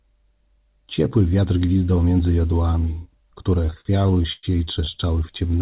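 Speech heard through a narrowband call path, with nothing above 4 kHz, which fits G.711 mu-law at 64 kbps. Between 3.62 and 4.46 s it shows repeated stalls (stutter): packets arrive late or too slowly, the jitter buffer runs dry about ten times, and the receiver extends the last sound to bridge each gap, the longest about 103 ms. Roughly 238 ms, about 28 percent of that span, is concealed sound, so the speech drags and stutters without losing anything.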